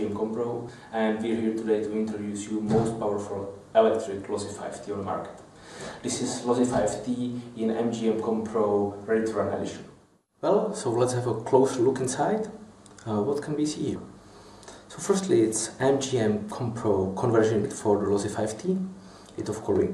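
Three jumps at 0.68 s, 13.95 s and 17.64 s are compressed frames skipped: whole chunks of the encoded audio never got played, either missing from the file or thrown out by the decoder as damaged, so the sound just leaps forward. The jumps are roughly 50 ms, about 70 ms and roughly 50 ms, which fits dropping two or three frames of about 26.1 ms each.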